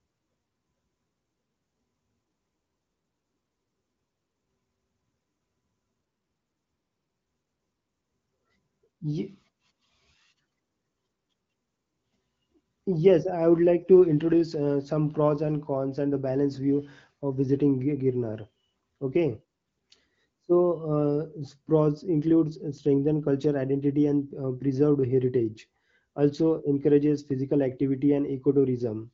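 The clip is speech coded through AMR wideband (HD Voice) at a rate that fits 15.85 kbit/s, with nothing above about 7.5 kHz, and nothing is technically wrong with it.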